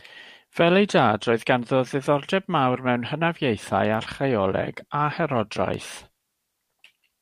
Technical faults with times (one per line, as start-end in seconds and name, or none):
3.94 electrical switching spike
5.74-6.20 CD scratch ticks